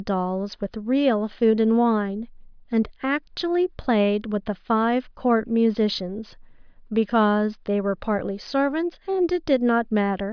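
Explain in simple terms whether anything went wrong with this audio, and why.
Nothing went wrong here: no technical faults can be heard anywhere in the recording.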